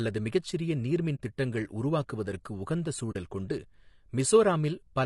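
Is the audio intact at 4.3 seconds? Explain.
No. At 4.3 seconds, as across the whole speech clip, the voice sounds rough and grainy, with a hiss filling the gaps between the pitch harmonics and a dull, somewhat synthetic top band. This is likely low-delay AAC compression (AAC-ELD) at a bitrate around 32 kbps. Its short frames of roughly 10 ms cannot resolve the harmonics finely, and at this bitrate too few bits remain, so the damage stays plainly audible.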